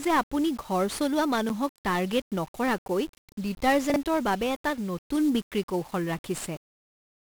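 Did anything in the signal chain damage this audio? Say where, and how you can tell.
Yes. The codec stage applied 1-bit DFPWM compression throughout. Heavy broadband fuzz buries the treble in hiss, which fits a bitrate near 48 kbps. On a spectrogram it shows as a uniform noise floor smeared across all bands.

At 1.49 s, just before "টাৰ্গেট নকৰাকৈ", a block of digital silence about 9 ms long, likely from a late buffer fill, drops to silence. The waveform shows a flat line with vertical edges.

From 3.90 to 3.96 s, before "বাবে এটা", the buffer or network stage played chunks out of order. A 20 ms segment plays late, which points to a chunk about two places out of sequence. The jumble has three hard joins that show as waveform discontinuities and spectrogram streaks.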